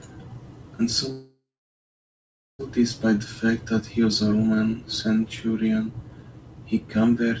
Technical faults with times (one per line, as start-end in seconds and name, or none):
1.12-2.61 call audio freeze